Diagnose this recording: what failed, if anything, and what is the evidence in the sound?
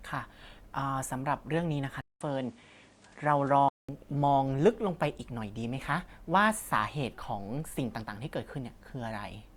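Input switched to a poorer device, 2.01 to 3.89 s: after a 200 ms gap, speech loses everything above 10.5 kHz and gains faint background noise, likely from a driver-level input change.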